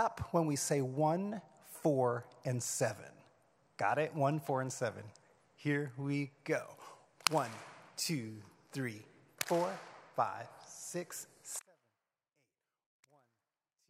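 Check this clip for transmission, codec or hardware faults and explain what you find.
One fault is present: an audio dropout to a faint residue beginning at 11.60 s and lasting to the end of the clip. The signal cuts out abruptly rather than fading, leaving only a faint trace of the sound roughly 35 dB below its previous level. The likely cause is a break in the signal feed while the downstream path stayed live. On a waveform the envelope collapses to a thin band at that instant; a spectrogram shows a sharp vertical edge into near-empty, dim energy.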